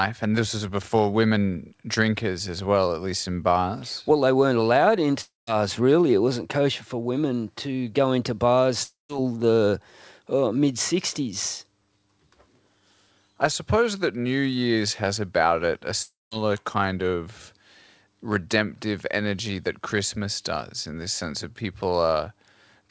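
At 5.21 to 5.5 s after "they weren't allowed", 8.83 to 9.12 s between "women to go into" and "the uh mid", and 16.02 to 16.34 s between "has about it a" and "kind of", the speech breaks off in a long network dropout, likely lost packets. Roughly 0.27 to 0.3 s never arrives, and a fading buzz briefly continues the last sound before 0.15 to 0.19 s of silence. The waveform shows a decaying smear and then a flat line. The spectrogram shows a dark vertical gap across the band, which the call codec cuts off at 8 kHz.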